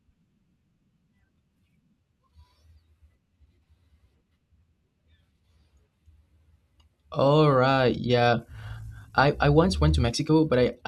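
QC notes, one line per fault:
7.52–10.88 s: time-stretched section. Speech suddenly runs 1.4 times faster at unchanged pitch, sounding rushed. Likely squeezed by dropping short pieces.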